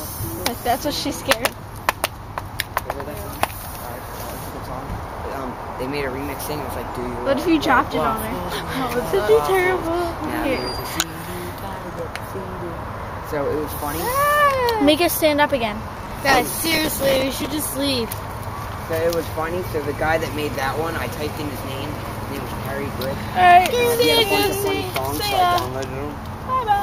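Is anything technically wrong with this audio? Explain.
Yes, there's processor overload crackle from 11.71 to 11.99 s and again, longer, from 15.97 to 17.52 s. The processor missed many tiny buffer deadlines in a row, replaying stale few-millisecond scraps that sound like gritty tearing.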